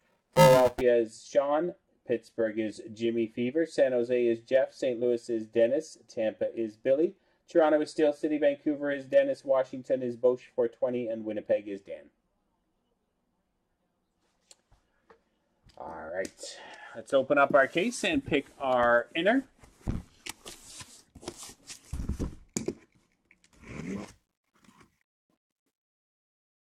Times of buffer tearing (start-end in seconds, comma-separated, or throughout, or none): 0.00-0.81